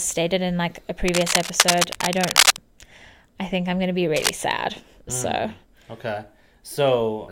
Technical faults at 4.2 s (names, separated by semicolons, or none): cable scratch noise